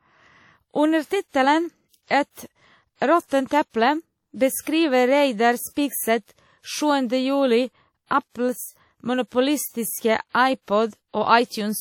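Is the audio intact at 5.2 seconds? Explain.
No, at 5.2 s the speech carries the washy, ringing hiss of likely WMA compression, present throughout, consistent with about 48 kbps; the spectrogram shows smeared transients and nothing above 18.4 kHz.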